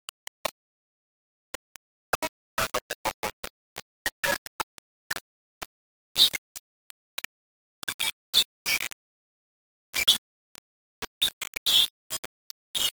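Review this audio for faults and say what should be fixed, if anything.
The whole clip has a grainy, gritty distortion that shifts with the sound, and the quietest stretches break up into sputtering or drop out entirely. That's low bit depth without dither: the audio was most likely rounded down to 4 bits, so the rounding error tracks the signal instead of sitting underneath as a steady hiss, and it's nearly as loud as the sound itself. To prevent it, keep at least 16 bits and add dither whenever you reduce the word length.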